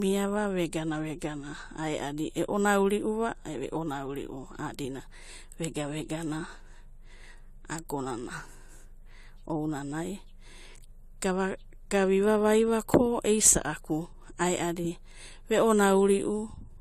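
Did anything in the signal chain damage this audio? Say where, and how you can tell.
Yes. Throughout the speech, nothing sits above 14 kHz, and the top end has the smeared, swirly texture of heavy perceptual coding. This is likely low-bitrate audio saved at a high bitrate: a coarse first encode that the later MP3 stage preserved but could not undo.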